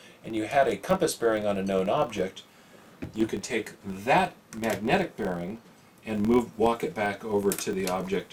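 From start to end, a filter restarted on every block begins each block from silence, leaving a small transient that sounds like a 43.1 Hz buzz following the level, which fits 1024-sample blocks. A spectrogram shows evenly spaced vertical lines; the waveform shows regular spikes.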